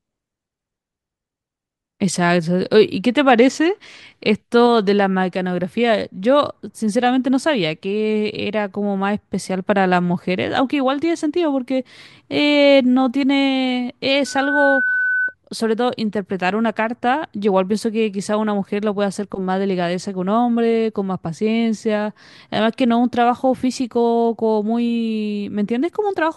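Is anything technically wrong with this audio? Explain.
Yes. From 14.25 to 15.35 s there is loudspeaker feedback squeal: the microphone picks up its own loudspeaker, and at 1.5 kHz the loop gain passes one. The tone swells over about a third of a second to roughly speech level. Unlike a steady interfering tone, it grows out of nothing.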